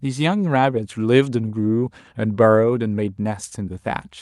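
No audible technical faults.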